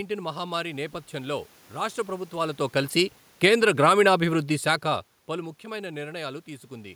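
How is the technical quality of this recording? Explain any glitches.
There is one technical glitch in this speech recording. From 3.29 to 3.65 s the level sinks by about 5 dB, the voice and its background fading together; that is automatic gain falling, the gain control judging the input too loud or its background noise too strong and pulling its gain down. The room noise, and the level shifts near 2 s and 4.5 s where the talker moved relative to the microphone, belong to the recording itself.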